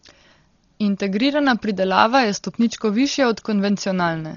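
Speech, and it's been through the wringer from start to finish: nothing at all comes through above 7 kHz, so it sounds dull and boxed-in, with a rough, fluttery noise hanging around the voiced sounds. That's most likely Dolby Digital compression pushed hard. The encoder cut the band and starved lots of frequency lines of bits, leaving the decoder to fill them with noise. The damage is heavy and points to a very low bitrate, something like 32 kbps.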